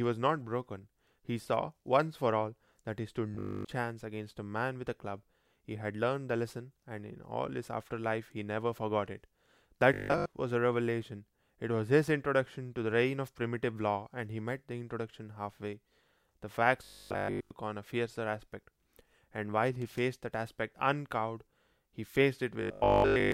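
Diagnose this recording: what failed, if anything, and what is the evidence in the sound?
Robotic sound from repeated short buffers at 3.35–3.71, 9.94–10.26, 16.85–17.51 and 22.62–23.32 s. It's a rigid 50 Hz buzz, likely a buffer stage looping 20 ms chunks.

Loose connector crackle from 19.82 to 19.99 s, a brief irregular scratchy burst. That points to analogue wiring, with a contact rapidly making and breaking.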